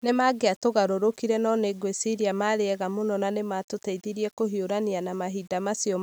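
Low bit depth without dither runs through the whole of this speech clip, heard as a grainy distortion that tracks the sound, roughening quiet passages and sputtering or dropping out on the softest decays. The likely cause is rounding to 8 bits without dither, leaving error around 35 dB below the signal.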